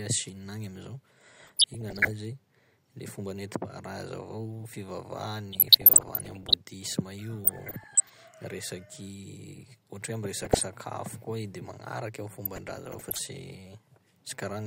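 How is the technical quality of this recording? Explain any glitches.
The speech in this recording is marred by repeated DAB burbling, heard five times: 1.42 to 2.11 s, 5.53 to 6.54 s, 7.45 to 8.17 s, 10.40 to 10.66 s and 12.45 to 13.29 s. Weak reception lets bit errors, at a rate of somewhere under one percent, slip past error correction into the MP2 data. Corrupted samples put short blips of noise in individual sub-bands, and corrupted scale factors make sub-bands leap in level for up to a frame, and the dense clusters fit dozens of consecutive damaged frames. The result is bubbling blips of corruption riding over the speech. It differs from a packet dropout because the sound never goes silent or repeats. It is garbled band by band instead.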